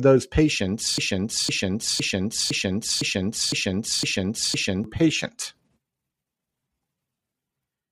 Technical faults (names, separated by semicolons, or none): broken-record loop